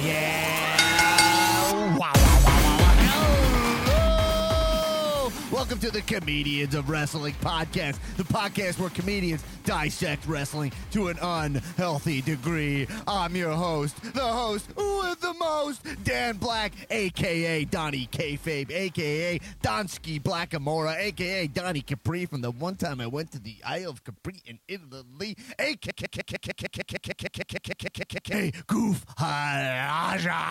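The audio falls into a broken-record loop from 25.91 to 28.34 s. A 0.15 s fragment repeats 16 times. A stalled player or stream likely kept resending it.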